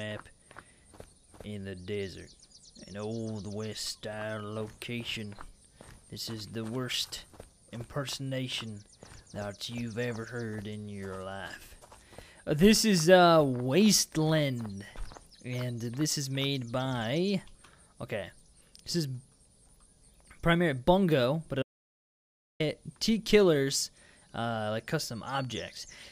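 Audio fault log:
21.63–22.60 s, audio dropout to silence: the sound stops mid-flow and about 0.97 s of silence follows before it resumes abruptly. The gap has no room tone or noise floor at all, unlike a quiet pause. Whatever occurred then is lost, likely from the input disconnecting or being muted while recording continued.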